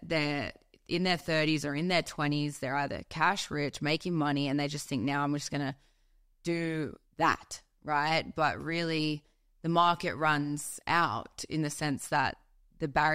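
No technical faults occur anywhere in the speech, so there is nothing to describe in time order.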